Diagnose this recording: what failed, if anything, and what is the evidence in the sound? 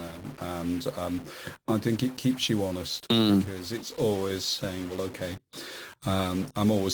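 A distortion rides on the speech from start to finish, and the pauses between phrases are filled with a gritty noise rather than falling quiet. That pattern points to a stuck bit, most likely a data line or converter output held at a fixed value. Roughly half the samples land offset by that bit's weight, so the error tracks the waveform, and near zero the flipping sign of small values turns silence into steady noise. The Opus voice compression layered on top is light and still reaches about 20 kHz.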